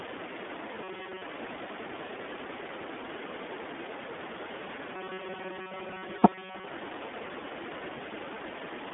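The speech is coded with the iLBC codec throughout. Nothing above 3.7 kHz survives, and each 20 ms frame sounds plainly rough and synthetic, which fits its 15.2 kbps mode.

From 0.83 to 1.22 s, and again from 4.93 to 6.68 s, there is robotic sound from repeated short buffers. The speech becomes a rigid metallic buzz at 188 Hz. This is likely a 5.3 ms buffer being replayed while new audio arrives too slowly, so roughly 70% of the sound repeats.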